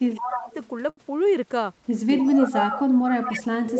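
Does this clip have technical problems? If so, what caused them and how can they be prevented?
Yes, the clip has several technical problems.

Speech suppressed in double talk: From 0.11 to 0.49 s, and again from 2.22 s to the end of the clip, the speech dips sharply, by about 20 dB in the first stretch and about 30 dB in the second. This is likely an echo canceller that could not separate the near talker from loudspeaker echo while both sides spoke at once, so it turned everything down. On a waveform the envelope caves in, and on a spectrogram the harmonics fade and the upper bands go dark. To prevent it, use a headset or an echo canceller with better double-talk detection.

Echo leak: A fainter copy of the speech, delayed by 300 ms and about 10 dB below it, comes through at 0.21–0.68 s, 2.18–2.79 s and 3.25–3.38 s. The far end likely plays the call on a loudspeaker, and its canceller leaves some of what the microphone picks up. 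That residue gets sent back. On a spectrogram, the harmonic patterns repeat 0.3 s later as weaker, sometimes patchy traces. To prevent it, lower the far-end loudspeaker volume or give its echo canceller a cleaner, linear acoustic path.

Short stall from a late packet: At 0.89–0.99 s a sound is held for about 78 ms too long, with a slight buzzy, flattened quality, but nothing is lost afterwards. A packet arrived late, the jitter buffer ran dry, and the receiver stretched the last audio until the packet came, then resumed at the same point. On a spectrogram this shows as a short, frozen, smeared band, and on the waveform as a repetitive stretch with unchanging periodicity. To prevent it, improve the network's timing stability or allow the jitter buffer a slightly larger target delay.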